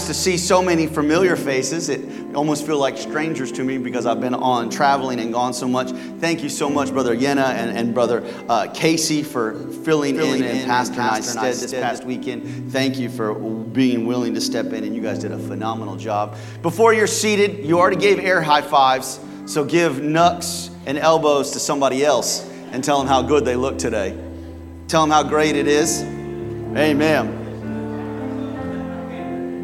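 From 10.15 to 11.99 s, a doubled audio track appears. A second full-band copy of the sound runs about a third of a second behind the original. It sits a few decibels quieter. It has no decay and no room colour, so it reads as a plain repeat rather than an echo. It starts and stops abruptly at the edges of that span. The likely cause is the same signal being captured twice, once through a slower path.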